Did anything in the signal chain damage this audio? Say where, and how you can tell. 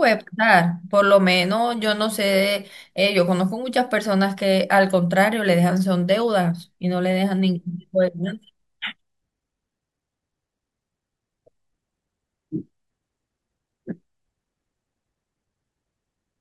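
No, nothing damaged this audio.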